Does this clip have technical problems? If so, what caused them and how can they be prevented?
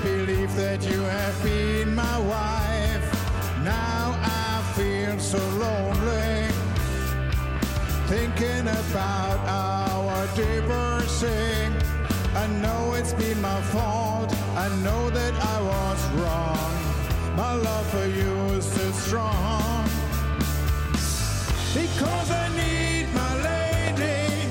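Yes. A sudden voltage step, likely from a plug, switch or static discharge, jolts the signal and produces a loud pop at 22.14–22.17 s and another at 23.88–23.90 s, about 10 and 15 dB above the sound, which continues underneath. Secure connections, switch equipment off before patching, and control static to prevent these pops.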